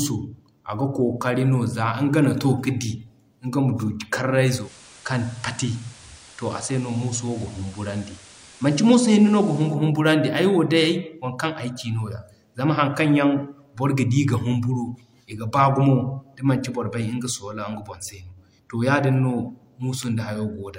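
At 4.55 s the receiver loses its digital stream and falls back to the station's FM broadcast, a digital radio blending to analogue, returning to digital at 9.78 s. Each crossover is a quick fade of about 0.16 s with no jump in loudness. During the FM stretch, hiss rises to roughly 25 dB under the speech, so the speech turns noisier until the digital signal returns.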